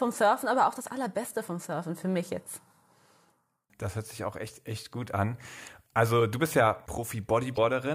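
A speech recording with damaged data in the compressed stream from 7.54 to 7.58 s. The decoder misreads the corrupted frames and hunts for the next valid header, producing a 40 ms glitch that appears as a brief broadband vertical smear on a spectrogram and a ragged, discontinuous patch in the waveform.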